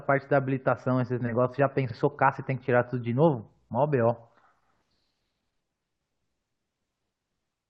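At 1.89 s to 1.94 s, the speech stutters from repeated frames. A 46.4 ms block of compressed audio, which fits about two codec frames, was delivered twice, so it plays once more. The clip runs 46.4 ms longer.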